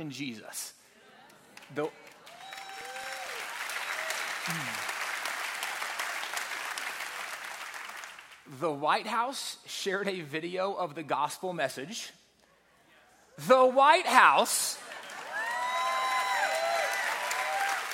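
From 2.36 s to 3.26 s there are CD scratch ticks. Five short clicks arrive at a steady pace, about five or six per second. Each lasts only a few milliseconds. A scratch or blemish on the disc surface spoils more data than the player's error correction can rebuild. It strikes once per rotation, which sets the regular rhythm. The player patches or silences the damaged samples. That leaves brief, evenly spaced ticks in the sound.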